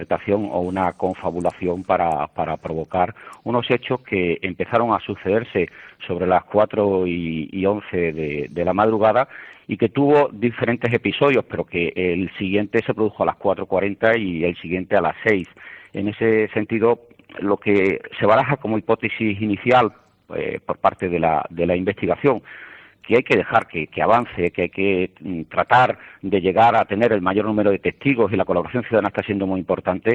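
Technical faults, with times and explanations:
No technical faults can be heard in this recording.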